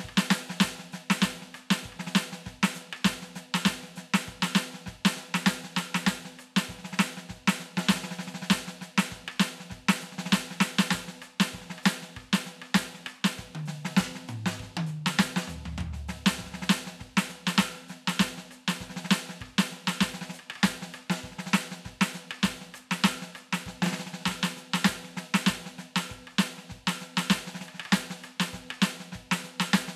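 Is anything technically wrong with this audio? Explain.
No, nothing technically wrong can be heard in this music recording; the signal stays intact and stable throughout, with no audible faults at any point.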